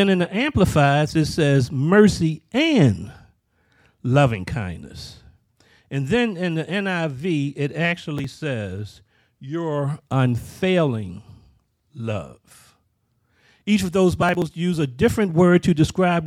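Two bursts of processor overload crackle turn up in the speech, the first from 8.18 to 8.34 s and the second from 14.23 to 14.42 s, between "of those" and "use a". In each, the processor fell behind and missed several buffer deadlines in a row. The missing chunks were dropped outright rather than repeated, so the sound skips with hard edges. The spacing of the ticks fits buffers of roughly 10 ms, which gives a short gritty tearing over the speech.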